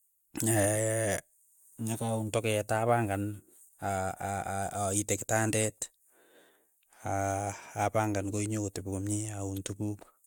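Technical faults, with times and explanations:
No technical faults detected.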